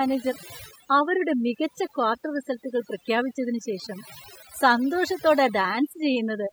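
From start to finish, the speech carries overdone noise removal: the noise reducer was pushed so hard that bands near its noise estimate get clamped down, quieter parts of the voice included. You hear near-silent gaps dotted with twinkly specks.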